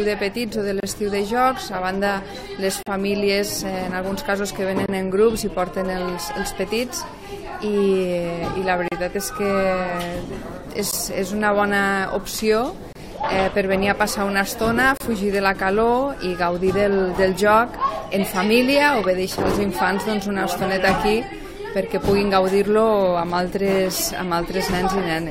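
Gaps between stream segments occur at 0.80, 2.83, 4.86, 8.88, 10.91, 12.93 and 14.97 s. Each is a hard-edged hole of silence lasting roughly 16 to 37 ms, falling on the boundaries of 2-second segments. The time stamps of adjacent segments don't quite meet, so the player pads the space with silence instead of sound. Nothing is missing from the audio. It is briefly pushed later, producing a regular, clipped dropout.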